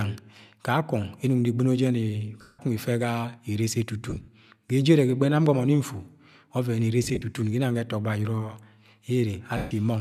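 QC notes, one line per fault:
2.41–2.59 s, 4.10–4.28 s, 7.04–7.22 s, 9.57–9.71 s: lost LE Audio frames. The decoder repeats the last spectrum with random signs, so sound smears into noisy hiss. It fades away during the solid 180 ms and 140 ms gaps and stutters briefly where losses scatter across 180 ms at 4.1 s and 7.0 s, with concealment steps that fit 10 ms frames, likely from LC3.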